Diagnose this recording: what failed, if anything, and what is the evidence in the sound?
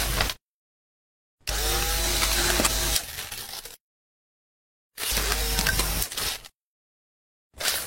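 Driver or buffer stage. There's a regular click about every 1.12 s, starting around 0.35 s and running through to about 7.04 s, so roughly seven of them. That steady spacing points to clock drift buffer slips. Two devices are likely running on separate clocks that disagree by something like 150 ppm. The buffer between them drifts until it has to drop or repeat a handful of samples, and each jump makes a tick.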